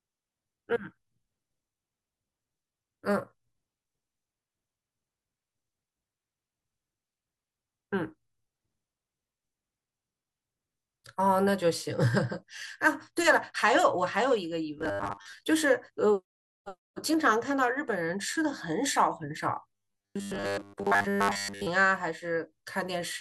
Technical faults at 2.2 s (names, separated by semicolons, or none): none